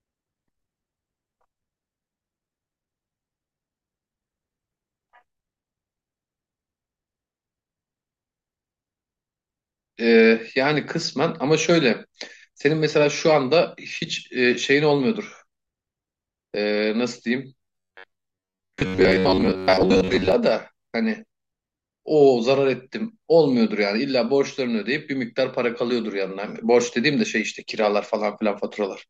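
A speech recording with robotic sound from repeated short buffers between 17.59 and 20.32 s. The voice collapses into a rigid metallic buzz at 93.8 Hz that loosely tracks the speech, and for most of that stretch the same tiny slice repeats instead of fresh audio. The likely cause is starved playback looping a buffer of about 10.7 ms. A spectrogram shows flat, evenly spaced harmonic lines every 93.8 Hz, and the waveform shows identical cycles repeating at that period.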